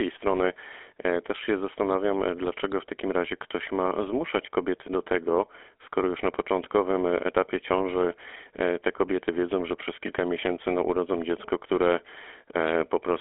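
From start to finish the speech passes through the GSM full-rate codec. It models the vocal tract as a filter and excites it with a sparse, regularly spaced pulse train, so fine detail of the voice source is thrown away, which fits a 13 kbps coder. The band is squeezed to a telephone line of roughly 300 Hz to 3.4 kHz, with nothing above 3.8 kHz, and the damage is plainly audible as a buzzy, gravelly roughness.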